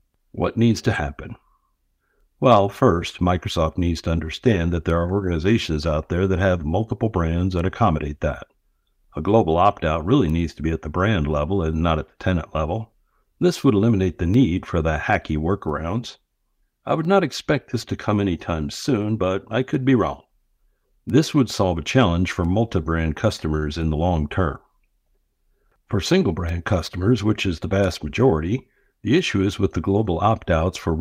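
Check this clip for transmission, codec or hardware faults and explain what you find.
One transmission fault is present in the speech. From 23.59 to 23.64 s there is a short stall from a late packet: the jitter buffer ran dry, and about 26 ms was filled by holding the last sound. Nothing is lost, but playback resumes 26 ms later, heard as a slightly stretched moment with a faint buzz or dip.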